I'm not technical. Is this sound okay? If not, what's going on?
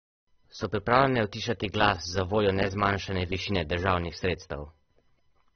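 No, not quite. Across the whole clip the speech sounds dull and a bit swirly, with nothing above about 6.3 kHz, so the crisp edges of s and t sounds are gone. That's most likely heavy AAC compression squeezing the file too hard.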